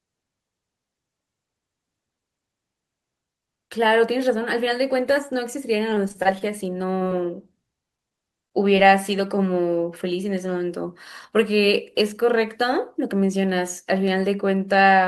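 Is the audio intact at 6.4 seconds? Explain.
No. Repeated packet loss (robotic sound) runs from 5.77 to 7.08 s, covering 6.4 s. Across that stretch, audio data keeps arriving late or not at all, and each hole is bridged by extending the preceding sound, with the longest hole about 29 ms. Around 142 ms is patched this way and roughly 60 ms is simply missing, so the speech turns choppy with small pieces dropped out.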